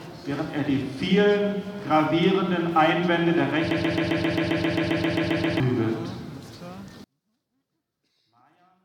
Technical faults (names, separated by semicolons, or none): broken-record loop; one channel inverted